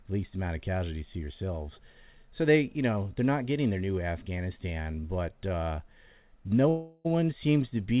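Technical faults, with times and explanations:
4.82 s to 4.88 s and 5.00 s to 5.06 s, short stall from a late packet: In each case the speech hangs for about 40 ms, with the last sound stretched and a slight buzzy wobble. A packet missed its playout time, the jitter buffer ran dry, and the receiver held the most recent sound until the data arrived. Playback then resumed from the same point, so nothing is lost. Each stall pushes the rest of the audio about 40 ms later.
6.69 s to 7.07 s, call audio freeze: For about 0.36 s the speech stops moving on. The last sound becomes a buzz that fades toward a faint hiss but never drops to full silence. The likely cause is packets held up in transit long enough to empty the jitter buffer, so the receiver had to invent sound to fill the wait. When the packets arrive, the speech continues where it stopped, adding a gap rather than losing anything. The band-limited sound around these events, with nothing above 4 kHz, fits a 64 kbps G.711 call path.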